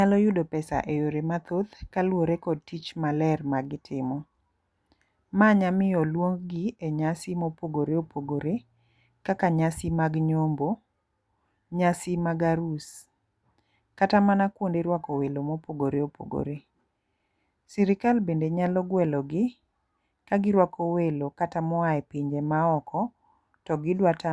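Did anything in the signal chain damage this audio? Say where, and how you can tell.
No, nothing damaged this audio.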